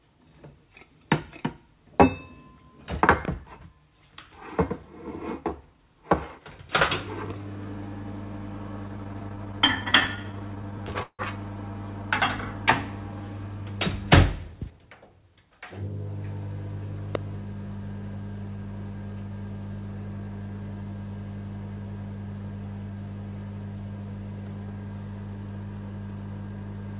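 At 3.25 to 3.31 s two sharp pops, about 15 dB above the sound, land in quick succession, and at 17.15 to 17.17 s a single louder pop, about 20 dB up, follows. These loud pops are likely voltage pulses from a plug, switch or static.

From 8.88 to 11.21 s the sound drags and stutters through 28 repeated stalls, the longest 161 ms. The jitter buffer kept running dry, and the receiver stretched the last sound to fill 426 ms.

From 14.31 to 15.51 s the sound hurries at 112% speed with unchanged pitch. This is a jitter buffer speed-up, trimming roughly 150 ms of excess buffered audio.

Throughout, the call path's G.711 coding leaves nothing above 4 kHz, as expected at 64 kbps.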